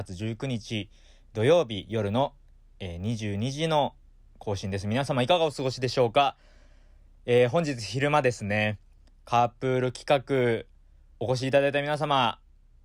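A 50 Hz buzz rides under the speech from start to finish, present only while sound is playing. It comes from a resampler restarted on every block: each 20 ms block was converted from 48 kHz to 44.1 kHz in isolation, leaving small errors at every block edge.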